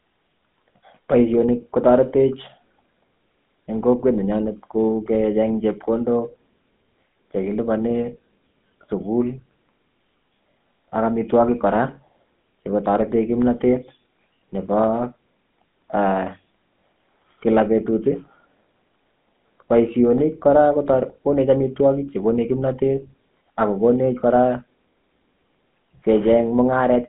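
Speech heard through the GSM full-rate codec the whole way through, squeezed into a phone band of roughly 150 Hz to 3.5 kHz with nothing above 3.7 kHz. The coarse pulse-driven excitation gives it a plainly audible buzzy, gravelly roughness, which fits a 13 kbps GSM stream.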